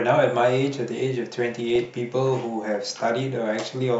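From 1.51 to 1.85 s the speech picks up DAB burbling: bit errors slipped past error correction into the MP2 data, so corrupted samples put short blips of noise in single sub-bands and corrupted scale factors make sub-bands jump in level for up to a frame. The bit error rate was about 0.3 percent.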